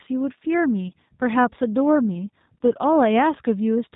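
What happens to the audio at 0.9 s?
A brief buzzy smear interrupts the speech from 0.88 to 0.91 s. The sound stretches into a droning, slightly tonal blur that sags in level instead of continuing cleanly, and it stays weak and roughened for a short stretch after the gap. This is VoIP packet loss concealed by the speech codec. About 30 ms of audio went missing, which fits three lost 10 ms frames. The decoder filled the hole by repeating its last pitch and vocal-tract settings with shrinking gain. Because each frame depends on the one before, the distortion persists briefly once packets resume.

The decoder doing that concealment is the G.729 codec, at 8 kbit/s. Its plainly audible rough, synthetic texture and the missing content above 4 kHz colour this moment too. The codec models speech as a filter driven by a pitch predictor and a few sparse pulses per frame, which gives the concealed segment its buzzy character.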